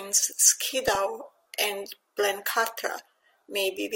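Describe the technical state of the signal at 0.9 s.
At 0.9 s the speech is hit by DAB burbling, running from 0.86 to 0.95 s. Weak reception lets bit errors slip past the error correction into the MP2 audio data. Corrupted samples put short blips of noise in single sub-bands, and corrupted scale factors make sub-bands jump in level for up to a frame. The result is a brief burst of burbling laid over the speech, which fits a bit error rate of around a tenth of a percent.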